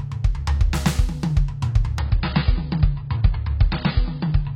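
A music clip that drops to an adaptive stream at a lower bitrate from 1.99 s to the end: nothing remains above 5.3 kHz, pointing to a very low bitrate, and codec artefacts thicken. The switch is abrupt but gapless, unlike a dropout.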